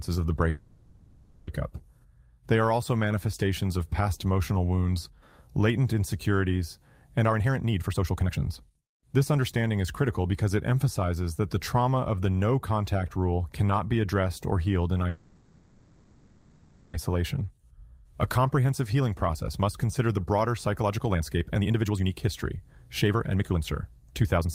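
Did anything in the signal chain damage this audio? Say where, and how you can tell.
Yes. At the network and jitter-buffer stage, packets were likely held up in transit, leaving the buffer empty at 0.49–1.49 s and 15.09–16.96 s. The receiver stretched the last sound into a fading buzz for about 0.98 s and 1.85 s. Speech then resumes where it stopped, so nothing is lost, but the call audio freeze adds delay.

Later the buffer held more audio than it aims for. The jitter buffer speed-up trimmed pitch-period slices to catch up: 132% at 7.24–10.34 s, 120% at 18.57–22.65 s and 130% at 23.07–24.48 s. Each run drops about a second or less, so the speech sounds hurried at unchanged pitch.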